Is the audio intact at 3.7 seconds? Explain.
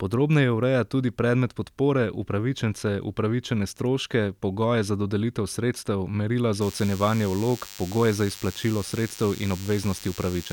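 Yes, the speech at 3.7 seconds is intact, with no fault to be heard at that moment.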